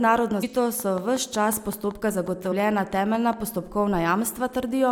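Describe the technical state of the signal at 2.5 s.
At 2.5 s a train of clicks is in progress, running from 0.80 to 3.34 s at a regular 5.4 per second, around fifteen in all, peaking about 5 dB above the speech. It is likely interference pulses from nearby equipment or a struggling interface, heard as steady ticking. On a waveform these are evenly spaced narrow spikes; a spectrogram shows thin vertical broadband lines.

At 2.51 s there is also damaged data in a compressed stream: corrupted bytes make the decoder misread the frame and resync at the next header, giving a brief glitch. The spectrogram shows a short smeared patch, and the waveform a small discontinuity.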